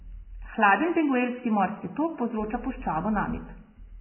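Heavy lossy coding, likely Vorbis compression at a very low bitrate in the region of 10 kbps, affects the whole speech clip. The encoder has discarded everything above about 3 kHz and quantised the remaining upper band so coarsely that its fine structure is replaced by noise of similar energy. The result is a dull, band-limited sound with a hissy, grainy texture, roughened tonal parts and smeared onsets from start to finish.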